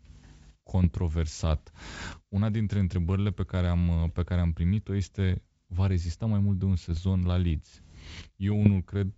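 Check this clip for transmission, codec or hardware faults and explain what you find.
Three short bursts of bit errors on an ADPCM link damage this speech, at 0.84 to 0.97 s, 6.86 to 7.00 s and 8.52 to 8.69 s, over what sounds like a wideband G.722 call. A sparse scatter of flipped bits knocks the decoder's step size and predictor off track, so each error rings on as pops and gritty roughness with brief jumps in level. On a waveform these spans show spiky, uneven envelopes. A spectrogram shows broadband vertical streaks.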